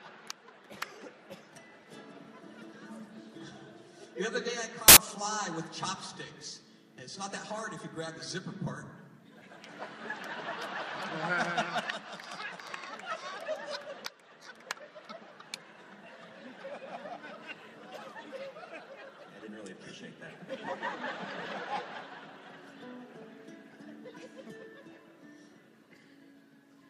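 At 4.88 s, a burst of loud, harsh noise cuts in and lasts until 4.97 s, about 85 ms. These are samples built from the wrong bytes. For this stretch, the reader misassembled each sample's bytes, through a one-byte offset, a swapped order or a wrong alignment. The rapidly changing low bits then landed in the high part of each value. The result is harsh broadband hiss. Then the audio snaps back.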